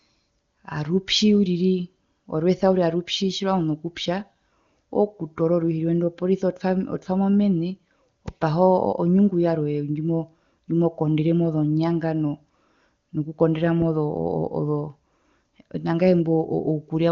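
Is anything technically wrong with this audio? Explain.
Yes. There is a loud pop from 8.28 to 8.30 s, a single sharp burst lasting about 20 ms. It peaks at about 5 dB above the speech around it. The likely cause is a sudden voltage step or pulse, from a plug, a switch, static or a driver glitch, entering the signal path. The circuits after it shape that pulse into a brief click. The speech carries on underneath the pop, and the wideband codec keeps it clear.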